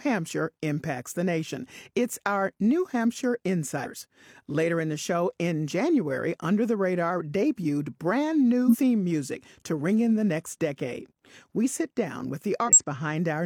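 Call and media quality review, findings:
Compressed frames skipped at 3.81–3.87 s, 8.64–8.77 s and 12.64–12.79 s. Speech jumps ahead roughly 150, 100 and 150 ms. The decoder lost or rejected frames.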